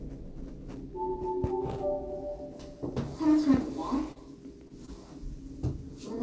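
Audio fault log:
4.12–4.18 s, 4.68–4.72 s, 4.86–4.89 s: short concealed packet loss. The receiver stretched the preceding sound across 20–40 ms holes, heard as smears or wobbles; spectrogram shows blurred, repeated texture.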